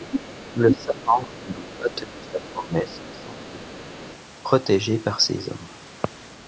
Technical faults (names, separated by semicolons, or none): other side's voice leaking through; speech suppressed in double talk